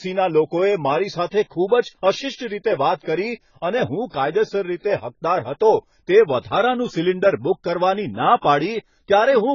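Across the whole speech clip, nothing is heard above 7 kHz, and sibilants turn fizzy and smeared with a warbling edge. That points to heavy AAC compression, likely AAC-LC at a very low bitrate near 16 kbps. A plain low-pass filter would sound dull but stay clean rather than swirling.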